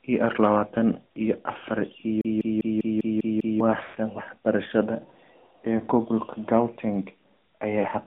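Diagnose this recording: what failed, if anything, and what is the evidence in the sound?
Codec stage: the whole clip is AMR narrowband mobile codec audio. Speech sits in a 200 Hz to 3.6 kHz band with nothing above, and it's plainly buzzy and synthetic. The vocal-tract model and sparse pulses make that sound, which fits a mid-rate mode around 10.2 kbps.

Playback stage: right after "lawatan iyo afaar", from 2.21 to 3.60 s, you get the CD stuck on one turn. A slice of about 0.2 s repeats seven times with a tiny mute at each jump. The laser keeps getting thrown back to the same spot on the disc.

Network stage: lost AMR speech frames show up at 3.85 to 3.98 s and again at 7.79 to 7.85 s. The first gap runs 120 ms, where the sound smears and fades toward silence. The second lasts 40 ms and is just a short dip. In both, the decoder is reusing the last good pitch and filter settings with falling gain, which points to roughly six frames gone and then two.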